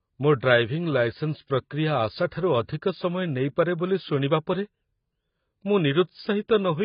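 Throughout the speech, nothing survives above about 5.1 kHz, with heavy smearing and a warbly, fizzy texture on sustained sounds and sibilants, likely from AAC compression at a very low bitrate near 16 kbps. A spectrogram shows a hard ceiling.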